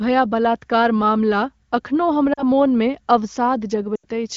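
At 2.33 to 2.44 s there's a short dip: lost AMR speech frames. Radio errors corrupted about 40 ms of speech, which fits two frames, so the decoder filled the gap by repeating its last good pitch and vocal tract settings at falling gain. From 3.95 to 4.05 s the dropout is longer, about 80 ms, and the sound sags to near silence before recovering roughly. The surrounding wideband HD Voice audio sounds clear.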